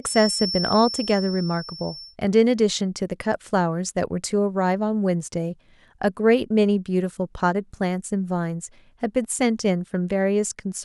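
From the start of the clip to 2.17 s, a feedback whistle sits behind the speech: a thin, steady tone at 5.4 kHz, roughly 10 dB below the voice and swelling and fading slowly in level. The likely cause is a loudspeaker-to-microphone loop running just at the edge of feedback, where the gain at that one frequency is high enough to sustain a tone but not high enough for it to run away and grow.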